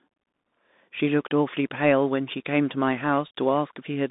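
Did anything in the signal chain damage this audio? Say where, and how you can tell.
Yes, at the codec stage: a Bluetooth CVSD headset codec across the whole clip. Nothing passes above 3.8 kHz, the band sits near 200 Hz to 3.7 kHz, and s sounds turn scratchy over a granular hiss. That grain is what separates it from a plain telephone band-limit filter.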